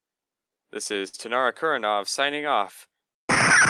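Clock drift between sender and receiver runs through the whole clip. The sender's clock is roughly 5 percent slower than the receiver's. The jitter buffer keeps draining, so the receiver must stretch the sound to keep playing. Small timing wobbles recur unevenly throughout.

Repeated timing corrections run from 0.18 s to 3.14 s. The receiver keeps repeating short slices to cover the slow sender, playing at about 98 percent speed. Together they add roughly 70 ms.

A short stall from a late packet runs from 1.08 s to 1.15 s. The buffer ran empty and the last sound was held for 53 ms until the packet arrived. Nothing is lost. The sound hangs briefly, with a slight buzz or dip, then carries on.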